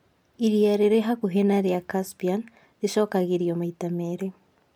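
No technical fault can be heard anywhere in the recording, and the signal holds steady throughout.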